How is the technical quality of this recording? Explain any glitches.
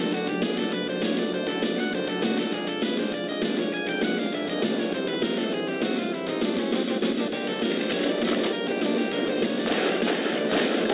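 No technical faults are audible.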